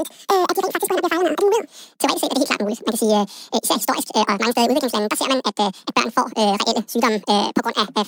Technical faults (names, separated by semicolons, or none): audio read two samples at a time (double speed)